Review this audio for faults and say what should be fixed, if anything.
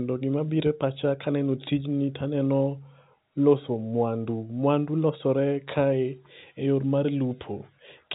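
Nothing here needs fixing: the speech arrives as ordinary G.711 A-law telephone audio, with its band topping out near 3.8 kHz as that format is built to do.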